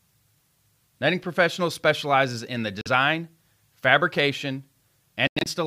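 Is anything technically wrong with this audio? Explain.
Yes. The speech cuts out abruptly twice. Right after "specializes in the", the sound vanishes from 2.81 to 2.88 s, a hole of about 46 ms. Then from 5.27 to 5.47 s it stutters, with gaps totalling about 140 ms scattered across roughly 190 ms, the longest about 93 ms. Each time the speech resumes further along, as if it had kept playing. This is likely a Bluetooth dropout: packets reached the headphones too late and were discarded, leaving silence until good ones arrived.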